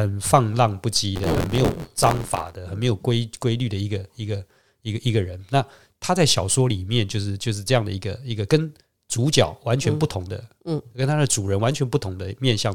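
From 1.15 to 2.56 s there's buffer tearing: writer and reader slipped, so a small slice of each period replays audio about 20 ms stale, giving an 86.1 Hz robotic buzz that fits a 512-sample buffer.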